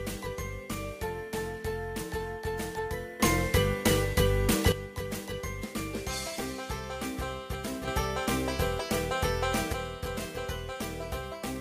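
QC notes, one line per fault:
3.20–4.72 s, sudden gain jump: a digital gain change was likely applied in a single sample step with no ramp, so the sound and its background noise leap up together by about 11 dB, stay raised for 1.5 s, then snap back down.
7.88–9.73 s, sudden gain jump: an abrupt gain step, likely from a setting or bit shift taking effect instantly, lifts the sound and noise floor together by about 6 dB for roughly 1.9 s before dropping back just as sharply.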